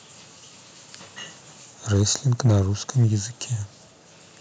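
Microphone overload occurs three times, at 1.93 to 2.03 s, 2.45 to 2.61 s and 3.01 to 3.06 s, putting a harsh, crackly edge on the loudest moments of the speech. The input gain was likely too high, pushing peaks about 2, 4 and 1 dB past the converter's ceiling. The waveform shows flattened, squared-off peaks, worst in the middle burst, where around a tenth of samples are cut. The spectrogram shows brief vertical smears of broadband distortion.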